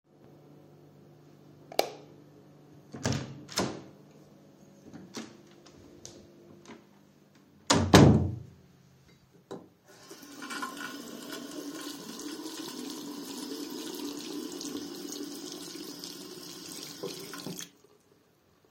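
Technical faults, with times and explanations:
Throughout, sample clock jitter: the converter's clock wobbles by something like a couple of microseconds, so each sample lands slightly off time. The error grows with how fast the waveform moves, giving a roughness roughly 35 dB under the signal that swells on loud, bright sound and drops away in quiet stretches.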